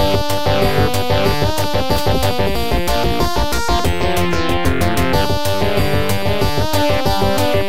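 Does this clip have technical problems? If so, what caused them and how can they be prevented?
Yes. A DC offset of about -19 dBFS runs throughout: a constant is added to every sample, so the waveform sits off the centre line and a spectrogram shows a steady stripe at 0 Hz, silently eating headroom. A DC-blocking high-pass filter at capture prevents it.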